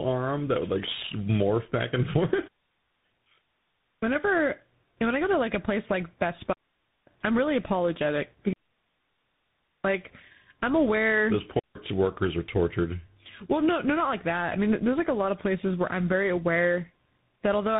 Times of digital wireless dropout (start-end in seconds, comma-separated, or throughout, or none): 6.53-7.07, 8.53-9.83, 11.59-11.75